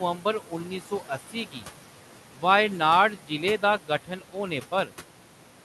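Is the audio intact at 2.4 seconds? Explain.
No. From 2.34 to 2.43 s, just before "वायनाड जिले दा", the speech sounds swallowed and faint, dropping by about 12 dB. This is speech cut by the noise suppressor, which mistook that stretch for background noise and turned it down. Underneath, the residual room noise carries noise suppressor artifacts, because the suppressor lowers the noise bands frame by frame by about 12 dB.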